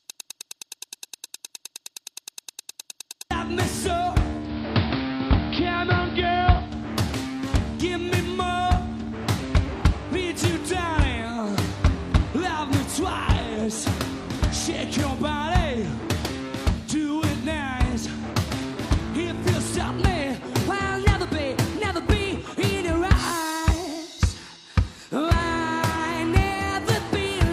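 From the very start to 3.31 s a broken-record loop is already running: a fragment about 0.10 s long repeats exactly, back to back, 31 times. A player or stream likely stalled and kept resending its last buffer. Unlike a stutter or dropout, the repeats are identical and nothing new arrives.

From 4.37 s to 6.76 s the digital radio blends to analogue, fading over about 0.2 s to the AM broadcast. The level shifts by about 2 dB, and hiss rises to roughly 20 dB below the signal. This differs from a codec low-pass because of the added hiss and the smooth cross-fades at each end.

From 19.87 s to the end, the section plays at the wrong speed, 1.12 times too fast, which likely comes from a clock mismatch. The pitch rises by about two semitones along with the tempo. A pitch shift alone would not also hurry the timing; here both move together.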